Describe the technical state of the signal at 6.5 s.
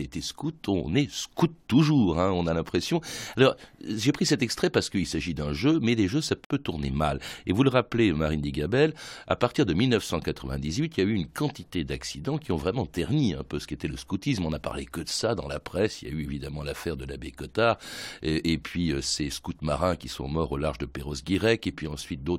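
A gap at a join of encoded pieces runs from 6.45 to 6.50 s. Encoder padding leaves a 58.5 ms gap. The speech then resumes where it stopped.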